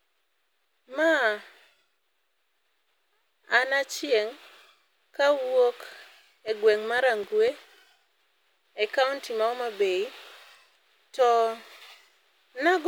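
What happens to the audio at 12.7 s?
Nothing goes wrong at 12.7 s; the audio is intact at that moment.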